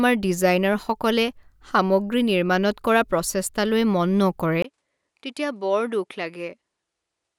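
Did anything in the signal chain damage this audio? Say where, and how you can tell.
Yes. At 4.62 s, after "কৰা প্ৰচেষ্টালৈ মন নকৰে", a 20 ms gap. The sound then goes dull, with nothing above 11.4 kHz, plus a level drop of roughly 10 dB and faint new hiss. The cause is likely the input switched to a poorer device at the driver stage.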